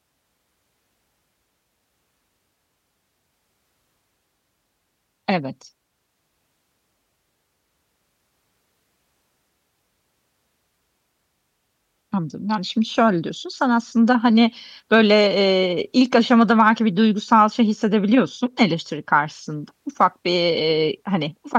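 No technical faults can be heard anywhere in the speech recording.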